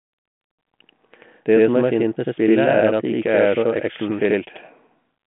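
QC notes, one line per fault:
Throughout, channel delay (doubling): one side of the stereo pair runs about 85.3 ms behind the other, and once the two are folded to mono you hear every syllable twice, as a tight slap echo at the same level as the original. That gap is long enough to hear as a separate copy rather than as comb-filter colour, and it fits a 4096-sample buffer offset. The narrow phone band, with nothing above 3.8 kHz, comes through in both copies.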